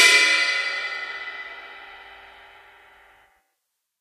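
From 0.95 s to 3.73 s the audio carries word clock ticks, roughly three of them, about 1.5 s apart. The receiving device is running on its own clock, off from the sender's by something like 15 parts per million, so each time the two clocks slip past each other a single sample is dropped or repeated. Each slip is a short, sharp tick. On a spectrogram each tick is a thin vertical broadband line, and on the waveform a one-sample step breaks the curve.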